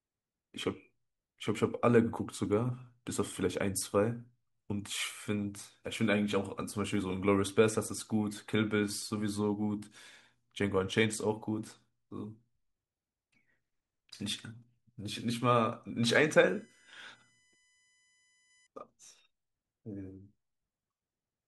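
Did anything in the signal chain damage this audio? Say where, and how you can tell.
Yes. USB whine enters through analogue power or ground wiring from 16.15 to 18.67 s. A fixed tone sits at 1 kHz, strongest at 2 kHz, well below the speech. That is the bus's 1 ms frame current.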